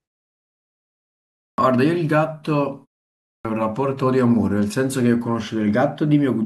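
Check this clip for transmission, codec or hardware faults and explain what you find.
The clip has clipped starts after pauses at 1.24 s and 3.10 s. After silences of 1.24 s and 0.32 s, the output device wakes late and swallows about 0.34 s and 0.35 s of speech, so each phrase begins abruptly, missing its opening sounds.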